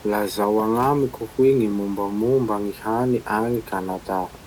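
Listening to this speech recording, nothing stood out as a technical problem, and the faint room noise sitting about 21 dB below the speech belongs to the recording space rather than the system.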